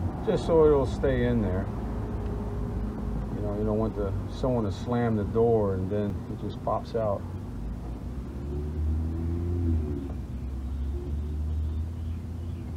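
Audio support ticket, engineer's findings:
Block of digital silence at 6.10 s: single sharp tick, about 2.9 ms hole. Likely output buffer not filled in time, consistent with a 128-sample block. Waveform: flat near-silent run with hard edges; spectrogram: thin full-band vertical line.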